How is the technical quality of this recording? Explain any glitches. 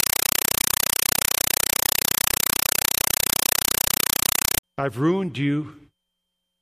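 Poor at the start: from 0.0 to 4.63 s, before "I've ruined", a compressed stream played as audio replaces the speech. An undecoded AC-3 stream, which fits a 256 kbps encode, is treated as samples. Its 5.33 ms noise bursts, 31.25 times a second, produce very loud, chattering static.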